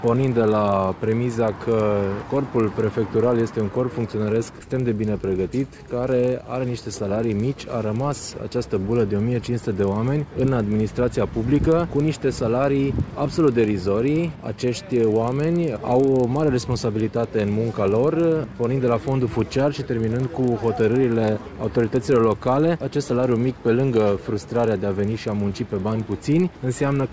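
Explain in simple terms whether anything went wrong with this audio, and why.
Something went wrong: the resampler restarted on every block. The sound was converted from 48 kHz to 16 kHz in separate 40 ms pieces, each handled as if nothing came before or after. Every seam leaves a tiny glitch, heard throughout as a faint buzzing tick, 25 times a second, whenever sound is present.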